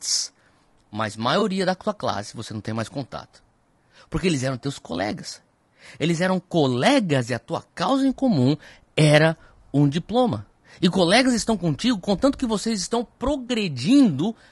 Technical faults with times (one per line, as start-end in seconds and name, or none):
0.00-14.51 low-delay AAC compression
1.39-1.43 AAC frame loss with concealment
13.47-13.50 AAC frame loss with concealment